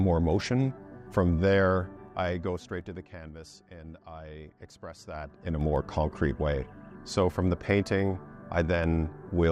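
A ticking zipper noise rides on the sound from 1.96 to 3.29 s as the level falls about 15 dB, and again from 4.91 to 5.76 s as it rises by about the same amount. Both moves jump in unsmoothed steps of about 3 dB, roughly four a second during the fall and seven a second during the rise, and each step clicks.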